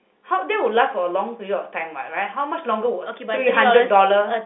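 Nothing faulty is audible in the speech, which carries the sound of a normal G.711 mu-law telephone path, with the line band running from about 200 Hz to 3.6 kHz and nothing above 3.8 kHz.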